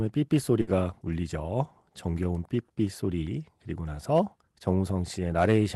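A short speech recording carries a burst of packet loss from 0.61 to 0.70 s: a run of call packets never arrived in time, so the receiver stretched and faded the last sound for about 60 ms before skipping ahead past the missing audio.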